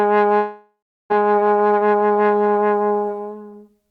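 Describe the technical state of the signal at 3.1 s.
At 3.1 s the signal is intact, with no audible fault of any kind.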